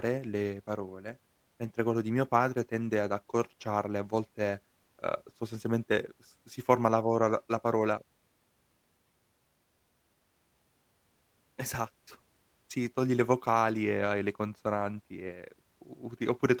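No technical faults can be heard anywhere in this speech.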